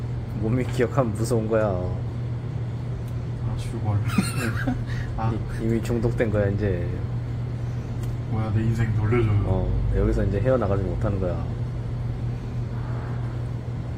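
At 7.57 s a call bitrate drop sets in and lasts to the end of the clip. The connection's bandwidth estimate fell, so the Opus encoder was pushed from 96 kbps down to 22 kbps, sitting at that floor for about 4.3 s. With so few bits, the sound turns coarse and watery and loses its top end. On a spectrogram the upper frequencies vanish above a sharp horizontal ceiling, and the remaining detail looks smeared.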